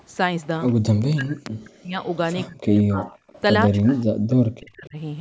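A faint, delayed copy of the speech ghosts in behind the talker at 0.39 to 0.46 s and again at 0.67 to 0.73 s, sitting about 35 dB down and trailing by 179 ms. This is echo leak, likely from a far end on a loudspeaker whose echo canceller let part of its microphone pickup pass back down the line.

From 1.05 to 1.99 s the talker's own speech sinks, in places by about 40 dB, for around a second. That is speech suppressed in double talk. With both sides talking at once, the echo canceller likely mistook the talker for loudspeaker echo and pulled the level down.

The echo scrap returns at 2.04 to 2.17 s. The speech dips again from 2.46 to 3.07 s for roughly half a second. From 3.03 to 3.41 s the echo comes back louder, about 25 dB below the speech, still 179 ms late. A final long suppression runs from 3.67 to 4.97 s, again about 40 dB at its deepest and about a second in total.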